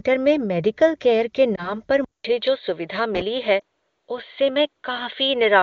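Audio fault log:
1.55–1.75 s and 3.60 s, lost AMR speech frames: radio errors corrupted one 20 ms frame each time, so the decoder rebuilt it from the previous frame's pitch and vocal tract settings with lowered gain. Each loss is heard as a brief dip or warble.
2.04 s onward, input switched to a poorer device: the system likely changed its capture input mid-recording. After a 200 ms silence at the switch, nothing above 4.5 kHz gets through, so the sound turns dull and boxy. Faint new background noise appears about 50 dB down, at much the same level.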